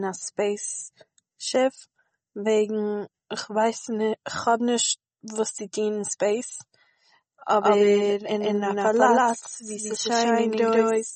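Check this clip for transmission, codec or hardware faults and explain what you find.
Two faults are audible: heavy lossy coding across the whole clip, and a second copy of the audio joining partway through.

MP3 compression runs throughout and is plainly audible. Nothing reaches above 8.4 kHz, a hard ceiling consistent with an encoder starved of bits, likely a very low MP3 bitrate of roughly 33 kbps. Starved of bits, it drops the treble and lets weak frequency lines flicker in and out between frames, so the speech sounds watery and swirly, with smeared consonant attacks. Unlike a plain low-pass filter, the band below the cut-off churns rather than staying clean.

A doubled audio track begins abruptly at 7.62 s and lasts to the end. A full-band copy trails the original by about 150 ms at roughly the same loudness, likely from a second capture path or a misaligned edit. Unlike an echo or room reverb, the copy does not decay or take on any room colour. 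It is an identical second layer that switches on at a single instant.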